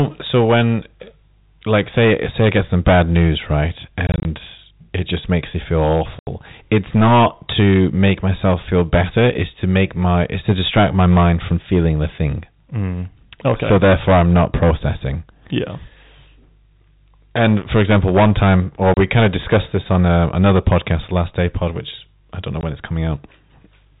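Hard clipping runs through the whole speech clip. The signal is driven about 13 dB past what the chain can pass, so a small share of peaks are sliced flat, adding a harsh fuzz to loud syllables. Packet loss filled with silence then punches holes at 4.07–4.25 s (100 ms of gaps scattered in short bursts), 6.19–6.27 s, 18.94–18.97 s and 22.61–22.63 s, with gap lengths that fit 10 ms packets.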